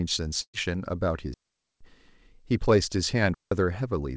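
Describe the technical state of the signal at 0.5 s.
A burst of packet loss runs from 0.42 to 0.55 s, covering the 0.5 s mark. Several consecutive packets never arrived in time, so the receiver stretched the last received sound across the gap and faded it out. About 115 ms is filled this way, with the level falling to near silence for roughly 70 ms. Speech then resumes, skipping about 120 ms of material, all within the call path's band limit at 8 kHz, which fits G.722.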